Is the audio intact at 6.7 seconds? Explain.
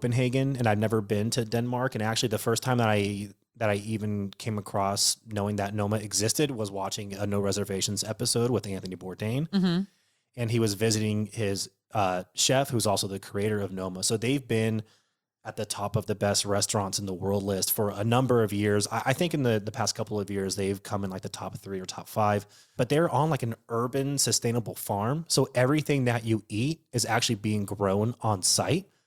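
No. From 6.48 to 7.12 s the speech sits under a sudden gain jump: the level drops by about 6 dB in a single step and climbs back at the end, with the background noise falling and rising in exact lockstep. The likely cause is a digital gain setting applied without a ramp. A compressor or fade would move gradually and would track the speech rather than the noise floor. Here the change is instant, and the speech and noise move together.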